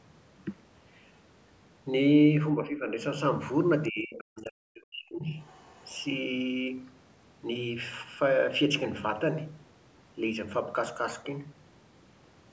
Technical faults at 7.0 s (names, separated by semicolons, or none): none